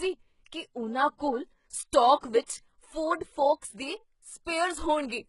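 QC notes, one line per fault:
Throughout: HE-AAC compression, likely. The treble is rebuilt rather than coded, so sibilants come out gritty and a bit lispy, and nothing survives above about 11.1 kHz. The damage is heavy, which fits a very low bitrate, somewhere around 12 kbps.
1.18 to 1.20 s and 2.46 to 2.48 s: pre-echo, first one right after "ਕੀ ਉਨ੍ਹਾਂ". A short hiss creeps in about 21 ms and 25 ms ahead of the attacks, because the codec smeared its noise across the block and softened each onset.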